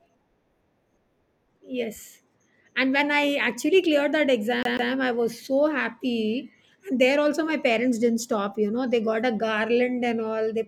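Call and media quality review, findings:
CD stuck on one turn, 4.63–4.92 s, after "I actually cleared that": 145 ms of speech repeats twice with a short mute at each jump. Likely a disc scratch throwing the laser back one track.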